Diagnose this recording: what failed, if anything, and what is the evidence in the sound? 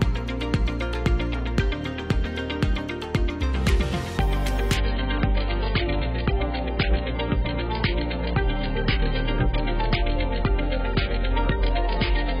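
Adaptive stream at a lower bitrate, from 4.77 s to the end: a network-stage fault. The sound abruptly loses everything above 5.1 kHz, with no gap and thicker codec artefacts, which fits the player switching from roughly 96 kbit/s AAC to a 12 kbit/s rendition after throughput dropped.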